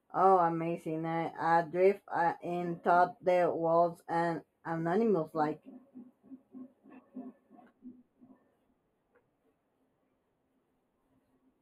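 One channel runs roughly a tenth of a millisecond late, consistent with a delay of a few samples, and summing to mono causes channel delay (comb filtering) throughout the speech. Cancellation cuts evenly spaced notches from around 5 kHz, so the top sounds hollow and dull.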